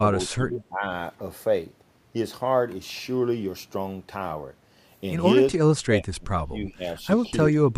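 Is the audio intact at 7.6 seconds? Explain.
No. Between 7.5 and 7.73 s the speech dips sharply, falling by roughly 15 dB at its deepest, with around 150 ms affected in total. This is speech suppressed in double talk, likely an echo canceller turning down this side's voice along with the loudspeaker echo when both sides talked at once.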